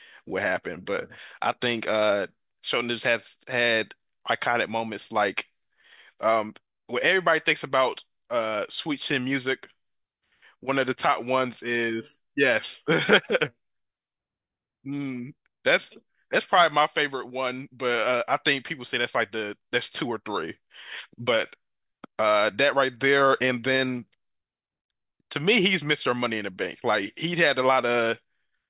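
No technical faults can be heard anywhere in the speech recording; the signal stays continuous and steady throughout.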